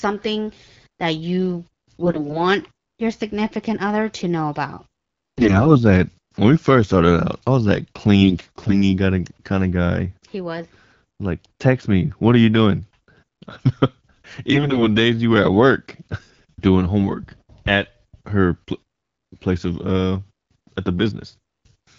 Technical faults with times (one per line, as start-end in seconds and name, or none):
2.02-2.39 AMR bit errors
5.38-5.78 AMR bit errors
8.22-8.75 AMR bit errors
14.52-14.83 AMR bit errors